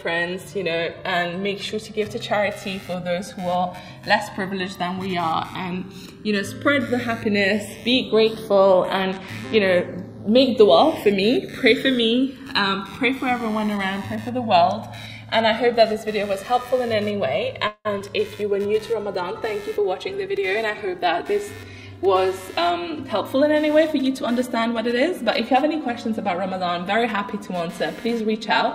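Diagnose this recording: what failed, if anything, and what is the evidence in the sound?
Channels drifting apart, at the converter stage: the two channels were captured on separately clocked devices, with a clock error of roughly 200 ppm, so the delay between them slides steadily across the whole clip and reaches around 4 ms by the end. Summed to mono, this sounds like slow flanging. On a spectrogram of the mono sum, comb notches sweep gradually through the spectrum. In the waveforms, the two channels walk out of alignment over time.

Computer activity noise enters through the analogue wiring from 2.02 s to the end. Load changes on the host computer are modulating the shared ground of the audio circuit. The result is a buzzing, chirping or scratching layer at about -25 dB relative to the signal, pulsing at roughly 100 Hz. It rises and falls with the machine's activity rather than with the sound. 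A spectrogram shows a ladder of harmonics spaced near 100 Hz that flickers independently of the programme.

Call audio freeze, at the network and jitter-buffer stage, occurs from 17.67 to 17.87 s. The receiver ran out of audio, likely because packets were held up in transit. It extended the last sound as a fading buzz or hiss lasting 176 ms, including about 50 ms of near-silence. Playback then resumes where it stopped, so nothing is lost but the delay grows by 176 ms. The waveform shows a decaying, repetitive fill before normal audio returns.

Skip ahead, also in the jitter buffer, occurs at 17.99 to 18.02 s, shortly after the freeze. With later audio already queued, roughly 70 ms of material was discarded and the two sides were joined with only a 10 ms fill. This cut the delay by roughly 50 ms. The ear hears an abrupt forward jump. The waveform shows a discontinuous splice, and on a spectrogram the spectral content changes instantly with no transition.

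Jitter buffer speed-up, in call processing, runs from 19.75 to 21.30 s. Having accumulated excess audio, the receiver repeatedly cut out short pitch-period-sized pieces, roughly 150 ms in total. Over that stretch the audio plays at 108% speed with unchanged pitch and sounds hurried. On a spectrogram, harmonic spacing stays constant while events crowd closer together in time. The waveform shows periodic cycles removed at many small splice points.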